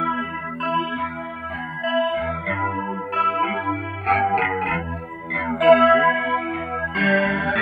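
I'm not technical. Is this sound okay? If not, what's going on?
No. From start to finish the sound has a hollow, phasey quality, as if heard through a tube, with the upper range thinned out. This is channel delay (comb filtering). One side of the stereo signal runs late by roughly a tenth of a millisecond, which fits a delay of a few samples. When both sides are mixed into one, the shared sound cancels at evenly spaced pitches, starting around 5 kHz, leaving fixed gaps in the sound.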